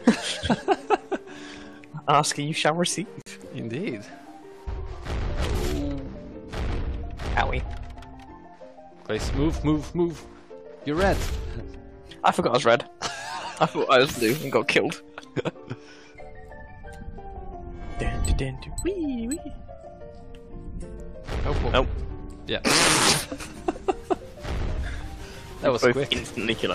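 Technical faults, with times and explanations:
3.22–3.26 s, gap between stream segments: a 47 ms hard-edged silence where two segment timestamps fail to meet. The player fills the hole with nothing, and no audio is lost.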